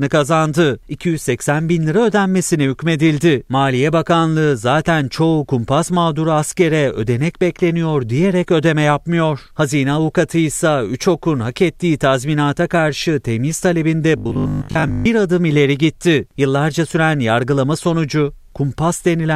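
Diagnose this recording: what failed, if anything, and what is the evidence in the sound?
Buffer stage, it looks like. From 14.18 to 15.06 s, after "ettiği tazminata karşı temiz", the speech turns into a stiff metallic 50 Hz buzz until "bir adım ileri gitti". That's robotic sound from repeated short buffers, likely starved input looping a 20 ms chunk through most of that stretch.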